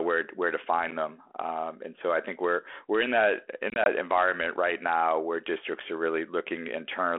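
At 0.91 s, just after "where where to", a block of digital silence about 12 ms long (which fits a 512-sample buffer going unfilled) leaves a tick. On the waveform it is a flat, near-silent line with abrupt edges, and on the spectrogram a thin blank column.

From 3.70 to 3.87 s, just before "environment right now where", packet loss on an ADPCM call removes 60 ms in a few dropouts scattered over 160 ms, none longer than 20 ms. Each hole is hard-edged. The 32 kbit/s G.726 decoder's predictor and step size then drift, so the speech returns slightly distorted. On the spectrogram these show as narrow gaps followed by smeared, distorted energy.

At 5.80 s, after "environment right now where", a second block of digital silence of about 7 ms gives another tick. It shows as a short silent stretch with sharp edges.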